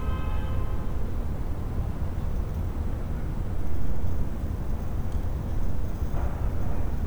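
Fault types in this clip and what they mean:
Dropped samples: sharp single clicks at 0.92, 2.57, 4.22 and 5.75 s, likely from a fraction of a millisecond going missing so the waveform jumps abruptly.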